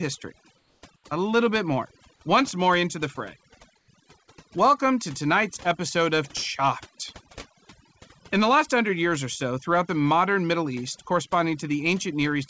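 Overdone noise removal runs through the whole clip. The suppressor pushes individual frequency bands down whenever they sit close to its noise estimate, and it takes quiet parts of the speech with them. The background drops and breaks up into twinkling specks. These flickering, tonal specks in the lowered background set it apart from a plain noise gate, which would mute everything at once. The band above 8 kHz is empty throughout, which fits a G.722 call path and is separate from this processing.

Comfort noise in place of the background appears in three short stretches: from 0.58 to 0.82 s and from 0.96 to 1.04 s, both before "a little bit more", then from 3.78 to 3.88 s, after "more into the fray". The likely cause is discontinuous transmission. The sender stopped sending in the pauses, and the receiver filled them with smooth synthetic hiss. That filler sits about 3, 7 and 4 dB below the real background. 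Its steady, featureless texture stands out against the specky residue around it, which is how to tell it from the noise-removal artefacts.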